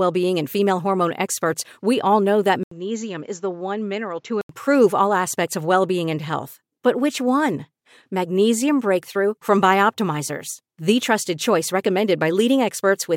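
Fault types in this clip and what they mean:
Input switched to a poorer device: Right after "we all know that", at 2.63 s, the sound drops out for 80 ms. It then turns duller, with nothing above 7.6 kHz. The level falls by about 5 dB. A faint new noise floor appears, roughly 40 dB below the speech. This is likely the recording moving to a lesser microphone or a headset's call profile. The fuller sound returns at 4.49 s, before "all aspects of well".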